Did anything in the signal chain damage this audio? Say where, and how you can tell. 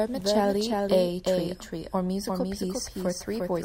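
Yes. Throughout the speech a second copy of the whole sound trails the original by roughly 0.4 s, about 5 dB quieter, full-band and dry with no room tail. This doubled audio track likely comes from a second, slower capture path or a misaligned edit.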